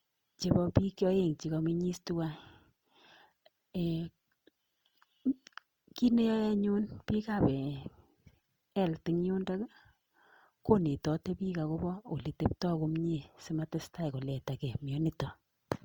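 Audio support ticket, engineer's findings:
Opus compression, whole clip, speech. Likely cause: low-rate Opus encode in music (CELT) mode, damage consistent with roughly 24 kbps. Band energies kept, starved bands filled by folding or noise. Result: plainly audible grainy, rough texture on voiced sounds, tonal parts turned noisy. Fullband retained, content extending to about 20.2 kHz, so no muffling from bandwidth narrowing.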